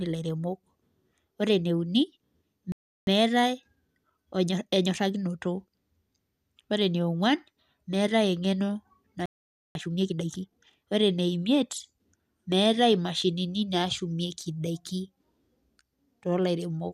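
At 2.72 s the speech cuts to silence for about 0.35 s, a playback stall, likely the player running short of data. From 3.07 to 5.39 s comes a time-compressed catch-up: the speech runs about 1.15 times fast at unchanged pitch, from spliced, cross-faded fragments. Unlike a dropout, the stall picks up where the sound halted, and unlike a tape speed-up, the catch-up keeps pitch steady. At 9.26 s a second stall of about 0.49 s, likely the same starvation, again resumes where it left off. A harder catch-up at 1.5 times speed follows from 9.75 to 10.73 s, more audibly rushed.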